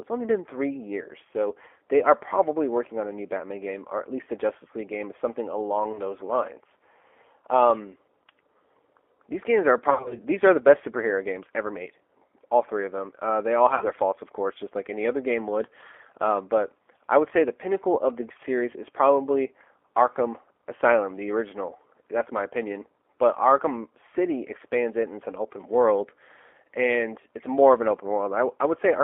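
Speech that has been through the G.729 codec at 8 kbit/s. The speech is rebuilt from a vocal tract filter, a pitch predictor and a few pulses per frame, so it sounds rough and slightly synthetic throughout, and the codec damage is plainly audible. On a spectrogram the energy sits in a telephone band of roughly 0.3 to 3.4 kHz, with nothing above and a hard floor below. The harmonics look smeared rather than cleanly striated.

VoIP packet loss concealed by the speech codec appears three times. The first is at 5.92 to 5.99 s, where about 20 ms is lost, which fits a single dropped packet. The second runs from 9.90 to 10.19 s, where about 140 ms is lost in scattered gaps over 200 ms, the longest run being 60 ms. The third is at 13.75 to 13.86 s, where 60 ms is lost. In each gap the decoder extends its last pitch and filter with falling gain, so the sound turns into a brief buzzy tone or coloured noise that fades. 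Because each frame builds on the previous one, the speech stays weak for a little while after real audio returns. On a spectrogram this shows as flat, repeated harmonic bands that dim. The waveform shows a decaying, overly regular periodic stretch, with the level recovering slowly afterwards.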